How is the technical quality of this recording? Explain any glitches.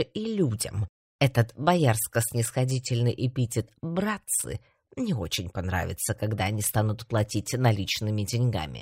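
No technical faults or glitches can be heard anywhere.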